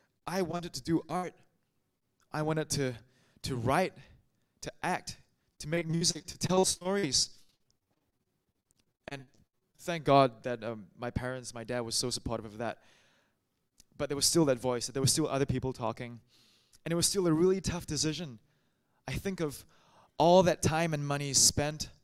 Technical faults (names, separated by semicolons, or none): repeated packet loss (robotic sound)